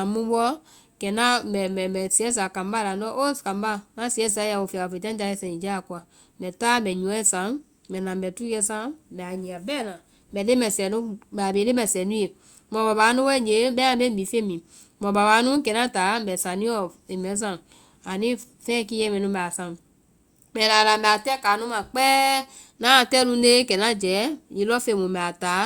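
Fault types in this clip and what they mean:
Nothing stood out on listening to this speech recording.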